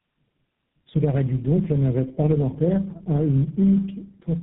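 Throughout, tandem speech coding passes the speech through about three low-rate codecs in a row, each degrading the last; the result sounds rough, muffled and warbly, with nothing above 3.8 kHz.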